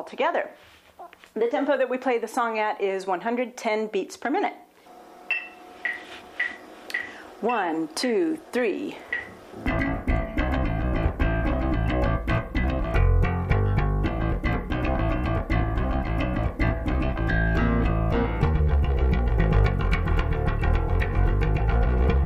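No technical faults can be heard anywhere in this clip.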